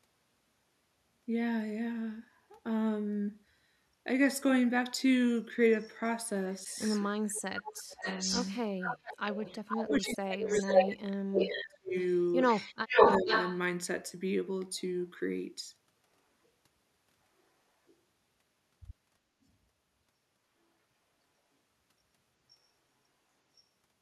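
Echo leak begins at 6.52 s and runs to 10.13 s: a delayed copy of the speech returns 438 ms late, about 10 dB below the direct talker. This is likely a far-end loudspeaker whose echo canceller failed to remove what its microphone picked up, so the residue was sent back. Speech suppressed in double talk cuts in at 7.79–8.06 s, and again across 9.67–11.94 s, with the talker falling away by roughly 35 dB for a total of about 2.3 seconds. Here the canceller, likely confused by both sides speaking together, turned everything down. Inside that span the echo leak returns louder, at 10.51–10.88 s (451 ms delay, about 5 dB above the speech) and at 11.38–11.67 s (456 ms, about 5 dB below). A final burst at 12.45–13.58 s arrives 464 ms late and about 5 dB above the talker, while a shallower suppression of about 25 dB at 12.84–13.28 s dips the speech again.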